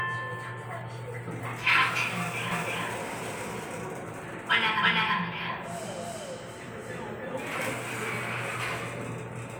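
From 2.51 s to 7.73 s, a doubled audio track appears. A second copy of the sound trails about a third of a second behind, roughly as loud as the first. It has no decay or room colour. It cuts in and out abruptly, likely from a slower capture path recording twice.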